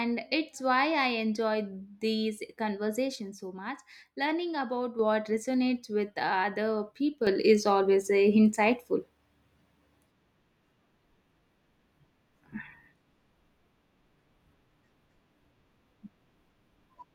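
A sudden gain jump arrives at 3.16 s, when the speech and its background noise both drop by about 6 dB in a single step, then return at 4.99 s. A second jump at 7.27 s lifts everything by about 7 dB and holds to the end. The noise floor moving in lockstep with the speech gives it away. The likely cause is a digital gain setting changed between samples with no ramp.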